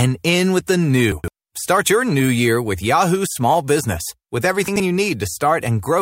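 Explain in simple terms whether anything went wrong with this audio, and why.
At 1.12 to 1.28 s, right after "in with the", the speech briefly jumbles, and it happens again, more briefly, at 4.68 to 4.8 s. This is chunks out of order. The sound travels in small pieces of about 40 ms each, and one piece arrived late and played after the ones meant to follow it, three pieces late the first time and two the second. Nothing is missing, but the reshuffled order and the abrupt joins cause the garble.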